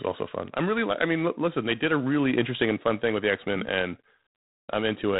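A speech clip passed through G.726 ADPCM coding at a low rate, which fits the 24 kbit/s mode, leaving too few bits per sample to follow the prediction error. Throughout, a harsh, rasping hiss rises and falls with the speech level, and nothing above 3.9 kHz passes.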